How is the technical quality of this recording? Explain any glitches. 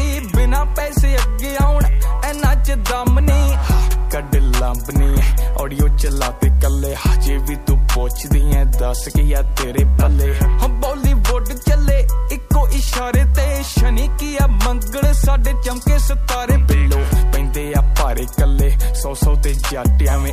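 The recording carries a constant video or display buzz from start to end. A screen or video cable is coupling into the audio. It adds a 50 Hz field-rate buzz, well below the signal, with a 15.6 kHz line tone above it.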